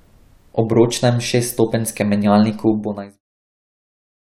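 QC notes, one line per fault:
No faults heard; the speech level eases down in a smooth editorial fade-out from about 2.5 s to 3.22 s, with no click or hard edge.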